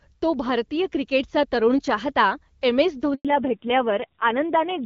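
A speech recording on a phone call, clear and full-bodied up to about 3.15 s, where the sound abruptly falls to silence for 100 ms, until about 3.25 s. This is a handover gap: while the call was being passed from one network to another, no speech frames reached the receiver, so the audio died within a few tens of milliseconds and stayed silent until the new link began delivering. Whatever was said in that tenth of a second is gone. When sound returns at about 3.25 s it is duller and rougher, and it stays that way to the end. That change is a fallback to narrowband: the call dropped from the HD Voice wideband path, whose brightness before the gap fits AMR-WB at around 12.65 kbit/s with only light coding damage, to an older narrowband codec, so nothing above 4 kHz survives. The extra graininess points to a low-rate narrowband mode, something like 5.9 kbit/s.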